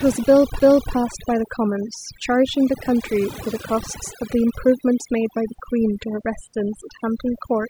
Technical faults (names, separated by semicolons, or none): overdone noise removal; CD skip